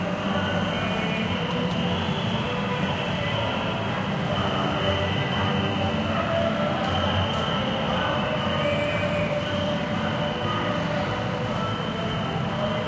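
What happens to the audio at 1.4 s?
Nothing goes wrong at 1.4 s: the sound passes through intact, carried over a call path whose content stops at 8 kHz, which fits a wideband G.722 link at 64 kbps.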